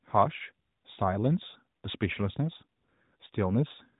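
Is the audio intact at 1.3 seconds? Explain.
Yes, at 1.3 s the speech is intact, with only the limited band and light coloring of the AMR narrowband mobile codec that carries it.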